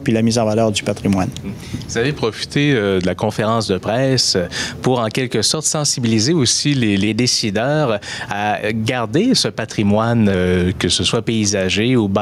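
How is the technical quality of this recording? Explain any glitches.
Technically it's rough: there's constant level pumping, and three short stretches where the pitch sags.

Gain pumping runs the whole way through. The level ducks by something like 15 dB under loud moments, likely an overdriven input feeding a fast limiter.

A drift correction step hits at 2.16–3.29 s, 6.46–7.07 s and 10.34–11.12 s. Playback slows about 6.4%, dropping pitch 114 cents, just over a semitone. That's likely clock-matching software stepping its rate to rebalance a buffer.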